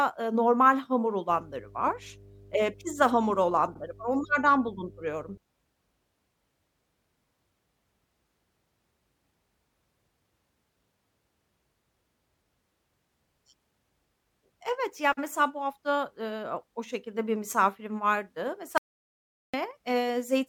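From 1.29 s to 5.38 s, just after "ııı normal hamur", mains hum intrudes: the power line is leaking into the signal path, most plausibly through a ground loop or a nearby transformer. Because the interference sits at 50 Hz, it comes through as a steady low drone with a few low harmonics beneath the speech, roughly 25 dB down.

Inside that hum, at 3.73 to 3.78 s, a stretch of compressed data was delivered twice, producing repeated frames. The decoder plays the same 48 ms of speech a second time, which fits a pair of frames being duplicated. The result is a brief stutter, and the clip runs 48 ms longer than it should.

After "şekilde bir misafirim vardı", from 18.78 s to 19.54 s, the input was lost while the recording carried on, likely from a disconnected device or a failed link, so silence was written in place of sound. This audio dropout to silence cuts the speech off mid-flow for about 0.76 s. 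The gap is dead silence with no room tone at all, and whatever was said during it is gone.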